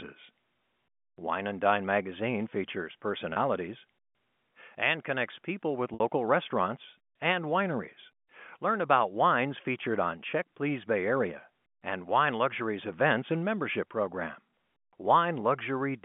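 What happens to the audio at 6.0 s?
Between 5.94 and 6.00 s there is packet loss with pitch repetition. About 60 ms of audio went missing, which fits two lost packets, and the receiver looped the last pitch period to fill the gap. The sound holds briefly on a buzzy tone instead of dropping to a silent gap or a click.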